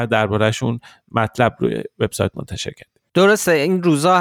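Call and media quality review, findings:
No audible faults found in this speech recording.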